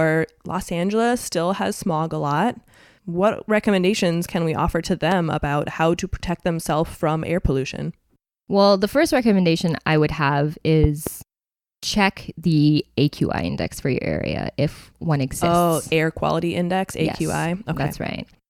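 Speech with a loud pop at 5.11–5.14 s, after "can we offer to", and a double pop at 10.84–11.10 s, after "recommendation I would have", jumping well above the speech. The speech carries on beneath rather than cutting out, pointing to a likely plug, switch or static transient.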